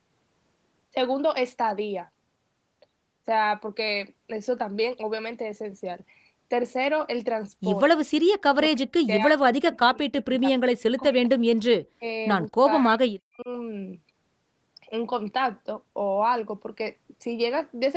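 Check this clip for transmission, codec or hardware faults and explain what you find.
The speech drops out in three places, most likely speech suppressed in double talk: from 8.69 to 11.6 s, briefly from 11.96 to 12.04 s, and from 12.48 to 13.49 s. The level falls by roughly 40 dB at its deepest, and the affected spans add up to about three seconds. When both ends of a call talk at once, the echo canceller can't separate this talker from loudspeaker echo, so it suppresses everything, cutting the speech in pieces. A network dropout sounds different: it leaves clicks, robotic repeats or concealment artefacts, while this is a clean gating of the level in bursts. The call codec's top end stops at 8 kHz.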